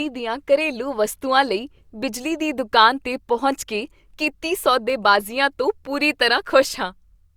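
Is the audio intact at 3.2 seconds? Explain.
Yes, the speech is intact at 3.2 seconds, with no audible fault at that moment.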